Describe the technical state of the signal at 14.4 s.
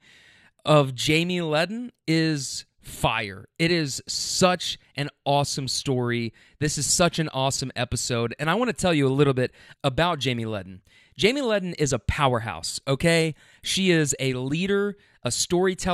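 At 14.4 s the speech signal is intact, with no audible dropout, clipping, distortion or other fault at that point.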